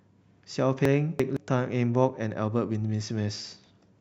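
Between 0.85 and 1.37 s, chunks out of order: one 171 ms block reached the output two blocks late and plays after the two that should follow it. No speech is lost, but this stretch sounds jumbled, with three hard joins.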